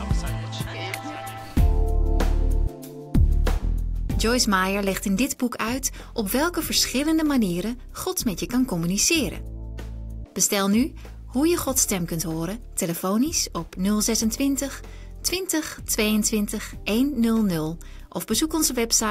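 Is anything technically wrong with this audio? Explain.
Yes. Clock slip clicks run from 0.36 s to 19.04 s, about every 0.4 s. The likely cause is two unsynchronised clocks drifting apart by roughly 70 ppm. Each slip drops or repeats one sample. The result is about fifty faint, regular ticks.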